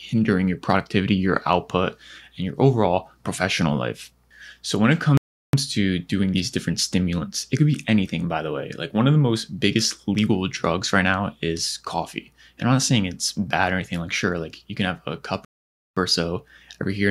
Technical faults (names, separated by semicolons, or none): playback stall